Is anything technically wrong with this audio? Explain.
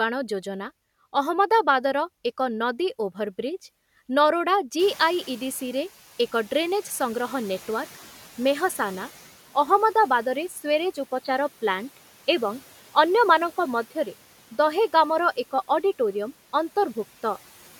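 Yes, there are three faults in this speech clip.

From 4.79 to 9.12 s the noise suppressor is catching up. The room noise jumps by about 24 dB near 5 s, and the suppressor's noise estimate takes about 4.3 s to follow it. At first the louder noise passes with less reduction, then it gradually sinks by about 9 dB. The slow downward slide is what separates this from the room noise itself, which simply steps up and stays there.

From 10.49 to 10.61 s the suppressor cuts into the speech. For about a tenth of a second it treats part of the speech as noise and pulls it down, by about 7 dB at the deepest point, so the sound goes briefly faint and swallowed. The dip is short and the tone is unchanged, which sets it apart from a change of input. A device change alters the whole timbre for much longer.

From 11.06 to 13.95 s the sound abruptly turns dull and boxy. A 20 ms silence marks the switch, and the level shifts by a few dB. 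A slightly different, very low noise floor comes in with it. This is likely an input switched to a poorer device, such as a headset call profile. The gap, the level jump and the new noise point to a different microphone rather than to suppressor filtering.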